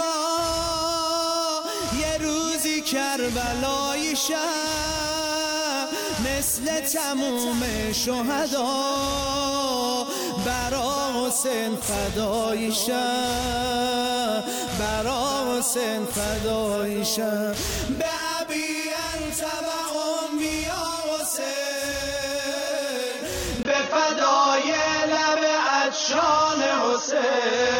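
At 23.63 s there's a brief dropout, about 20 ms, and from there to the end the sound goes dull and boxy. Nothing comes through above 6.6 kHz, the level shifts by a few dB, and a different, fairly quiet noise floor sits underneath. That combination points to an input switched to a poorer device, likely a fallback mic or a headset's call profile, which has a narrower band and its own tone and hiss.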